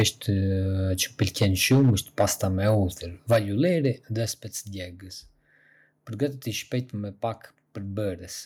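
At 0.00 to 0.03 s the opening peak breaks up with a harsh crackle, likely microphone overload: input gain set about 8 dB beyond the converter's limit, flattening the waveform tops across roughly a fifth of the samples. At 0.02 s the level then falls by about 4 dB in one clean step, likely the microphone volume stepped down by the call software reacting to that clipping. Unlike overload, this step changes loudness without adding grit. From 1.21 to 2.8 s the loudest syllables again carry a crackling edge, running about 6 dB over the limit, but only a small share of samples are cut, so the distortion is intermittent rather than constant. At 3.31 to 3.38 s, just before "ulliri dhe spec", another clipped burst sits about 5 dB over, and at 3.33 s the sound and background drop together by about 4 dB. At 4.32 s, right after "ulliri dhe", a further drop of about 6 dB follows with no distorted peak before it. 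The whole sound gets quieter at once, with no crackle, which sets it apart from overload.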